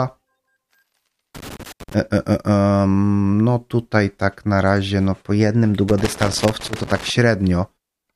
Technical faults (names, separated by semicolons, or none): loose connector crackle